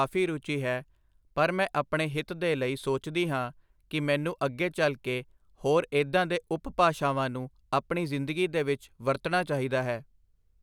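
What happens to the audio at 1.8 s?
Nothing goes wrong at 1.8 s; the speech carries straight through that moment with no dropout, click, glitch or other fault.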